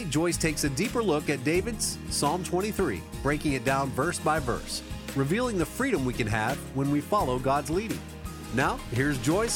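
No technical faults are audible.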